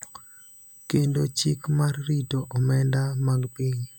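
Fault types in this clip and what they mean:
USB whine: current drawn in 125-microsecond USB microframes leaks through power or ground, adding a fixed 8 kHz tone, strongest at 16 kHz, roughly 25 dB below the speech throughout.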